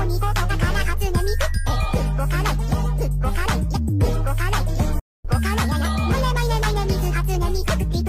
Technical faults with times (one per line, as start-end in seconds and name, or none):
4.99-5.25 playback stall